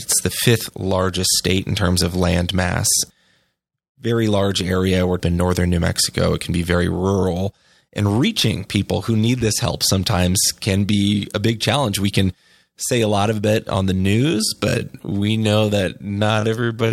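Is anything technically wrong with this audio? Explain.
Yes, there are two faults.

From 5.16 to 5.20 s there is damaged data in the compressed stream. For about 40 ms the bytes reaching the decoder are corrupt, so it misreads or discards the frames there and loses its place until it locks onto the next valid frame header. The result is a brief chirp or blip in the speech, most likely with a skip forward where audio was lost.

From 13.93 s to the end the speech abruptly slows to roughly two thirds of its original pace (0.657×) while the pitch stays the same. The speech drags. This is likely a time-stretched section, where software lengthened the audio to fit a target duration by repeating short fragments instead of resampling, which preserves pitch but leaves those artefacts.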